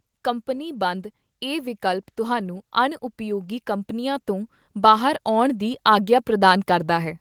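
From 0.23 s to 7.17 s, automatic gain rising: the gain control slowly lifts the level by about 12 dB, so speech and background swell together.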